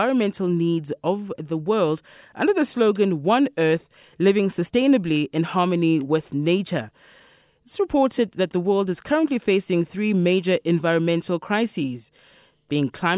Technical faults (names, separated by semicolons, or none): none